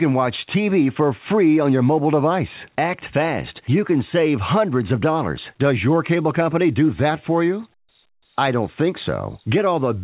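No technical faults are audible anywhere in the audio.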